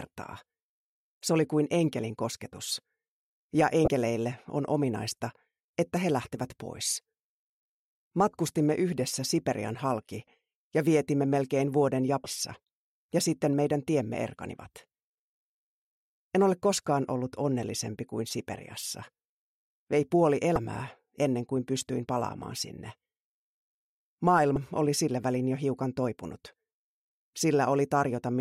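The audio carries four short bursts of damaged data in a compressed stream, at 3.84–3.88 s, 12.23–12.26 s, 20.54–20.57 s and 24.53–24.56 s, each lasting about 33 ms and heard as a brief chirp or blip. At each point some bytes of the encoded stream were corrupted, so the decoder misread those frames, lost sync and had to hunt for the next valid frame header before clean output resumed.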